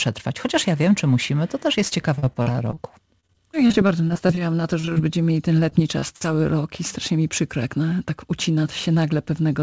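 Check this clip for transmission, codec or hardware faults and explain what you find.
Several network faults are audible, all on a call path whose codec passes nothing above 8 kHz, which fits G.722.

Repeated packet loss (robotic sound), 2.16–2.78 s, 3.20–4.40 s and 5.70–6.26 s: packets repeatedly went missing, each gap patched by extending the previous sound. The result is choppy audio with fragments dropped.

Short stall from a late packet, 4.80–4.85 s: the jitter buffer ran dry for about 38 ms, so the last sound was held until the packet arrived, giving a brief hold with a slight buzz or dip.

Short concealed packet loss, 4.85–4.89 s and 4.93–4.98 s: roughly 20 ms went missing each time and was filled by continuing the preceding sound. Each shows up as a quick smear or wobble.

Jitter buffer speed-up, 8.10–9.13 s: the receiver trimmed accumulated delay by cutting around 70 ms in tiny pitch-period slices. 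Playback runs about 7% fast at unchanged pitch and sounds slightly hurried.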